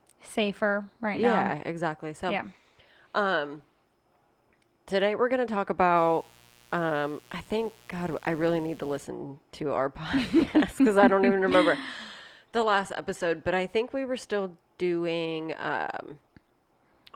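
From 5.97 to 9.04 s, a mains buzz appears. Switching spikes leak in twice per 60 Hz cycle and add a steady, raspy drone far below the speech. A spectrogram shows stacked 60 Hz harmonic lines reaching into the kilohertz range, and the waveform carries a faint 120 Hz spike train.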